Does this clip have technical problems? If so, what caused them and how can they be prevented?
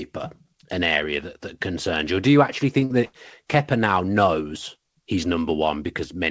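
Yes, there's a short concealed packet loss from 2.85 to 2.93 s, just after "do you actually". About 40 ms never arrived in time, so the decoder extended the preceding sound to bridge it, leaving a brief smear. Forward error correction or a deeper jitter buffer would help prevent it.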